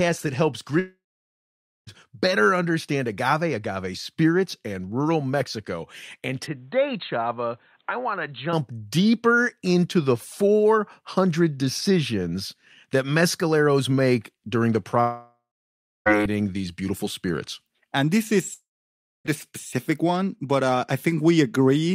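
A speech clip with two kinds of trouble. In three places the stream likely suffered a long network dropout: no packets arrived, so the receiver stretched the last sound into a brief fading buzz and then went quiet, and the speech resumes with that stretch gone for good. The first runs from 0.79 to 1.89 s, between "that helps" and "better understand agave agave", with about 1.1 s lost and roughly 0.88 s of silence. The second runs from 15.01 to 16.08 s, after "mescaleros make during the" and before "these beautiful spirits", with about 1.06 s missing and 0.65 s silent. The third runs from 18.54 to 19.27 s, with about 0.72 s lost and 0.62 s silent. Separately, the input was likely switched to a poorer device from 6.47 to 8.53 s, just before "deeper into the". The poorer device passes nothing above 4.2 kHz and brings its own background noise, around 40 dB under the speech. With no gap at the switch, the voice abruptly turns duller and boxier and drops in level by roughly 5 dB, then clears again when the original input returns.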